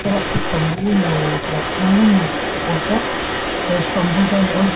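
An echo canceller on a loudspeaker end likely failed to remove what its microphone picked up, so this echo leak runs from start to finish: a delayed copy of the speech trails about 0.39 s behind, roughly 10 dB quieter, blurring the band-limited 4 kHz call audio.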